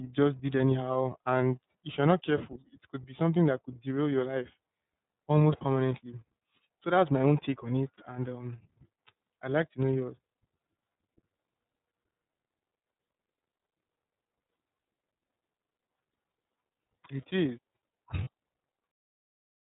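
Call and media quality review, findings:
iLBC codec across the whole speech clip. Band-limited, nothing above 4 kHz. Rough, slightly synthetic texture, plainly audible. Narrowband coder modelling each frame's excitation independently. Fits the 13.33 kbps, 30 ms frame mode.

Lost iLBC frames at 7.95 s, just after "my own take on", and at 18.24 s. Each gap about 30 ms. Short held, buzzy vowel-like fill. Decoder concealment repeating the last pitch cycle with noise. Fits one lost frame each. Clean recovery immediately after.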